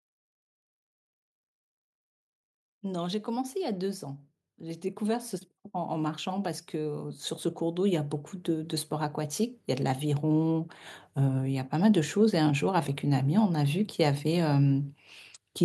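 A speech recording with automatic gain rising: from 2.8 s to 11.76 s the gain control, reading the input as too quiet, slowly lifts level by about 14 dB, voice and background swelling together. The waveform envelope widens steadily, and the spectrogram brightens uniformly, noise floor included.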